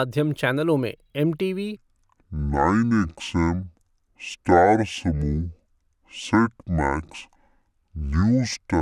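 From 1.76 s to the end, the speech plays as a section at the wrong speed, running at 0.557 times normal, so it drags and drops roughly ten semitones. Pitch and tempo fall together, unlike a pitch shift, likely from playback against a mismatched clock.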